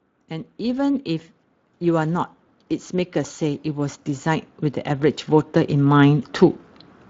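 From 0.15 to 6.41 s, automatic gain rising lifts the level by about 17 dB. The waveform envelope of both the speech and the background swells steadily as the gain control compensates for quiet input. Throughout, Speex codec damage is plainly audible. At roughly 20 kbps, the CELP excitation sounds hoarse and noisy.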